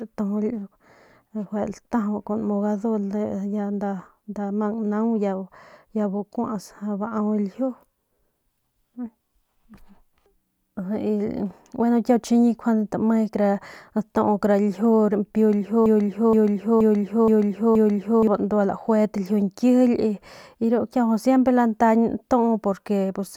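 From 15.86 to 18.27 s the speech stutters in a broken-record loop: one fragment about 0.47 s long plays five times back to back, identically. The likely cause is a stalled player or stream resending its last buffered piece, so the speech meant for that span is lost.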